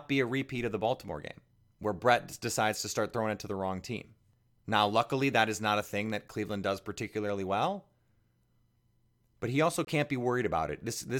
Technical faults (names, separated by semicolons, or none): corrupt frame muted